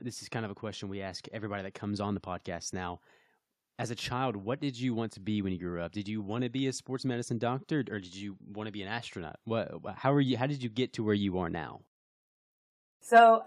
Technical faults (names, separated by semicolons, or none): none